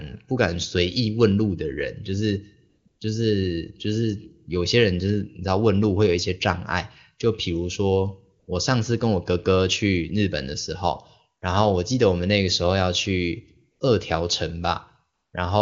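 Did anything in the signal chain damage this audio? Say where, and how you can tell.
Yes. AMR comfort noise shows up at the call-processing stage in five short gaps: 2.69 to 2.85 s, 2.87 to 2.99 s, 8.39 to 8.47 s, 13.71 to 13.79 s and 15.13 to 15.33 s. The phone decided nobody was talking and stopped sending speech frames, so the receiver filled those pauses with smooth synthetic hiss.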